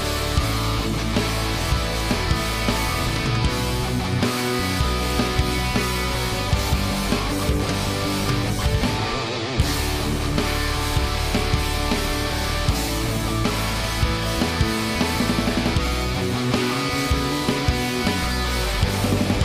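No technical faults can be heard anywhere in the recording. Nothing in the audio breaks, jumps or drops out at any point.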